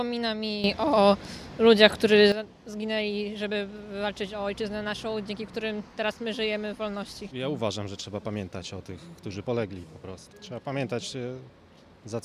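At 0.64 s the whole signal, background noise included, leaps up by about 12 dB with no fade and stays there until 2.32 s. That's a sudden gain jump, most likely a digital gain setting applied instantly rather than ramped.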